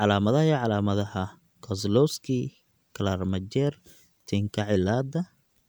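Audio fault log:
No faults detected in this speech clip.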